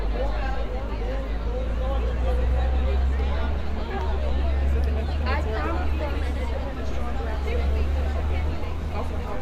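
No technical faults are audible anywhere in this audio.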